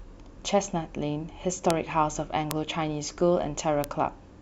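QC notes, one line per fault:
1.70 s, 2.51 s, 3.84 s: bit error spike, a single flipped bit throwing one to three samples up to about -5 dBFS and back, so each is an isolated broadband tick unrelated to the speech.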